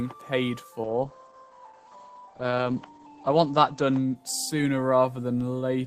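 From 0.84 s to 5.65 s the audio suffers a call bitrate drop. The sound turns rough and watery, and the top end disappears. The audible bandwidth narrows from about 20 kHz to about 8 kHz, which fits the encoder falling from roughly 40 kbps to 9 kbps after the call's bandwidth estimate fell. The worst stretch lasts about 2.25 s. With fewer bits, the codec quantises coarsely and discards high frequencies until the rate recovers.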